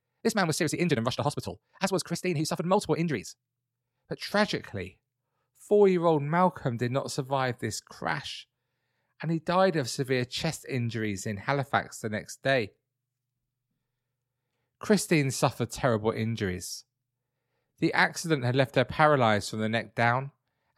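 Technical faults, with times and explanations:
0.00 to 4.18 s, time-stretched section: the speech runs at about 1.86 times its natural pace here, so it comes across rushed, yet the pitch doesn't rise the way it would if the tape were simply sped up. That mix of hurried timing with a steady pitch is the giveaway. The likely cause is software squeezing this stretch to fit a shorter slot by dropping short slices of the audio.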